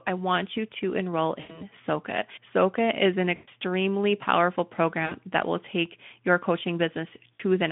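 Four gaps in the speech get smoothed over by VoIP packet loss concealment: 1.39 s after "want you to enroll" (100 ms lost), 3.35 s after "is an" (120 ms), 5.05 s before "that will take your" (60 ms), and 7.33 s (60 ms). Each time the decoder stretches the last sound into a buzzy tone or coloured noise that fades.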